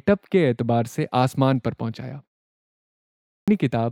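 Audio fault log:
3.32–3.48 s, clipped start after a pause: speech resumes after a 1.12 s silence with its first 157 ms missing, so the onset cuts in abruptly mid-sound. The output device drops into a sleep state during the gap and cannot wake quickly enough to reproduce the opening of the next phrase.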